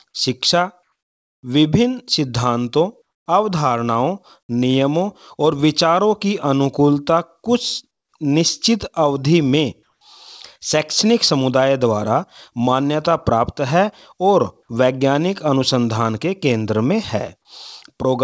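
Comfort noise stands in for the background at 0.83 to 1.43 s, 3.02 to 3.26 s, 7.91 to 8.12 s and 9.83 to 10.01 s. The faint real background turns into flat, featureless hiss, about 7 dB quieter at 3.0 s and about 12 dB at 7.9 s. That's likely discontinuous transmission filling pauses with synthetic noise.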